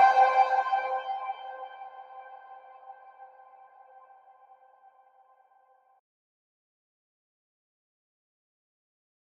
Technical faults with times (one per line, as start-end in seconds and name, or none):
0.00-9.39 noise suppressor applied to music or sounds